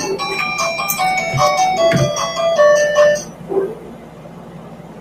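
Hard clipping runs through the whole clip: the sound is pushed roughly 11 dB beyond what the signal path can pass, so only a small share of samples hit the ceiling. The peaks are sliced flat, giving crackle and harsh fuzz on loud moments, visible as squared-off waveform tops and a haze of harmonics stretching up the spectrogram. A noise suppressor built for speech has also been applied to music or sounds. It treats sustained tones and ambience as noise, so levels pump and tails thin out with swings of around 15 dB. On a spectrogram, steady bands and reverb trails flicker and fade while onsets stay bright. Sound is cut by the noise suppressor at 3.2 to 3.51 s and again from 3.68 s to the end, where sustained material sinks by up to about 11 dB. These spans show as a shrunken waveform envelope and darkened, gappy regions between the sharp attacks.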